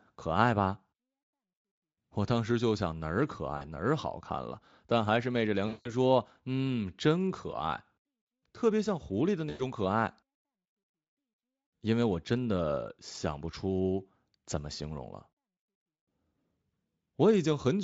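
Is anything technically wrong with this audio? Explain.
Yes. VoIP packet loss concealed by the speech codec is heard three times: at 3.57 to 3.64 s (about 40 ms lost), 5.67 to 5.94 s (about 180 ms), and 9.49 to 9.62 s (about 100 ms). When packets stopped arriving, the speech decoder kept extrapolating from its last pitch and filter state while turning the gain down. Instead of going silent, as a plain dropout would, the voice smears into a buzzy, fading tone, then stays weak briefly after packets resume.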